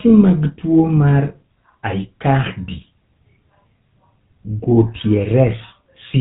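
Speech here has gone through the GSM full-rate codec for the whole clip, giving that buzzy, gravelly roughness and nothing above 3.8 kHz, which fits 13 kbps full-rate coding.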